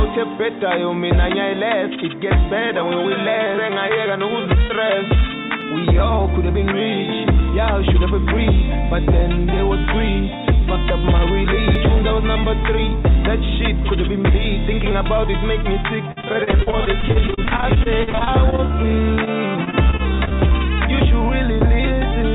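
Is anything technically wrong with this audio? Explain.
Yes. There are three kinds of fault, heard over audio whose working call path, which sounds like G.711 mu-law, leaves nothing above 4 kHz.

CD skip at 5.61 s and 11.75 s: the pickup laser jumped to a different turn of the disc spiral. Each time the player mutes for only a few milliseconds, leaving a tick, then resumes from another point, so the audio lurches abruptly.

Repeated packet loss (robotic sound) from 16.12 to 18.76 s and from 19.64 to 20.52 s: packets kept failing to arrive, and each hole was patched by extending the preceding sound. About a quarter of the first stretch and a fifth of the second is patched, with holes up to 48 ms, giving choppy audio with pieces missing.

Short concealed packet loss at 19.15 to 19.19 s and 19.25 to 19.28 s: roughly 20 ms of data missed the decoder each time. The receiver extrapolated from the last audio and crossfaded back, producing two brief smears.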